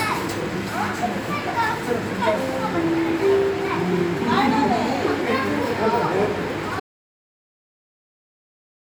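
At 6.80 s the sound drops out to silence, no room tone, through the end: an audio dropout to silence, likely a lost input.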